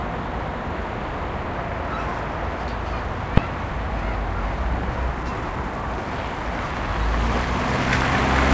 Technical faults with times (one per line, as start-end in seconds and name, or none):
2.68-2.70 skip ahead
3.37 invalid numbers at full scale
5.14-5.57 jitter buffer speed-up